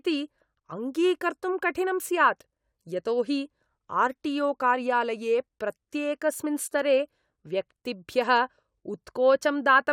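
Nothing to flag in this speech recording; there's no technical fault to point to anywhere along it.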